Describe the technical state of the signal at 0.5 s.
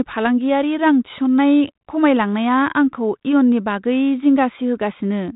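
At 0.5 s the speech is intact, with no fault at that moment, carried through a 32 kbit/s G.726 ADPCM telephone path that passes nothing above 3.8 kHz.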